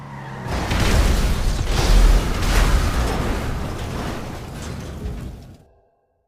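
There are no technical faults to describe.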